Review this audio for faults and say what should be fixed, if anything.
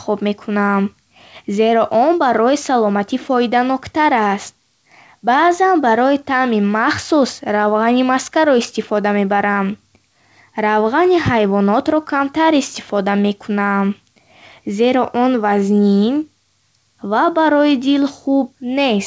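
No faults found; nothing here needs fixing.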